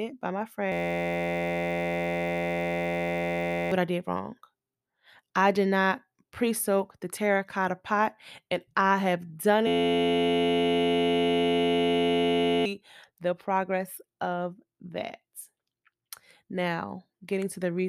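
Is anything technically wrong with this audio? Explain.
Yes. There are two system hang loops, at 0.72 to 3.72 s (after "by my", before "what I did wrong") and at 9.67 to 12.66 s (after "and I have done", before "the progress of"). Each is a steady buzz at 86.1 Hz that replaces about three seconds of speech. The buzz comes from one 11.61 ms slice, which fits a 512-sample buffer, looping while the system was frozen.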